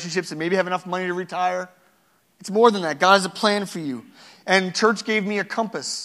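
Just after "enough money to retire", at 2.27 s, the speech jumps up in speed and pitch together. It runs about 5.6% fast and sits roughly 95 cents sharp, close to a semitone. At 3.85 s it snaps back to normal. This is a drift correction step. The likely cause is clock-matching software changing the playback rate in one jump to rebalance its buffer. The result is a sudden, brief detuning.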